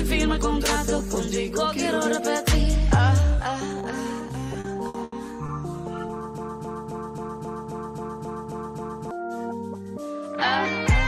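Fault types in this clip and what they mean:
Repeated stalls (stutter): Packets arrived late or slower than playback, so the jitter buffer kept running dry and the receiver had to stretch the last sound to cover each gap. Between 4.53 and 5.50 s this happens five times, filling about 210 ms in all, with the longest gap 80 ms, so roughly a fifth of that stretch is concealed. Nothing is lost, but the audio drags and stutters there.
Broken-record loop: Something in the chain, likely the player, encoder or stream, stalled and kept resending the last fragment it held instead of new audio. From 6.38 to 9.11 s a 267 ms piece repeats exactly, back to back, ten times, giving a mechanical, stuck-in-place sound. Whatever should have played during those seconds never arrives and is gone from the clip.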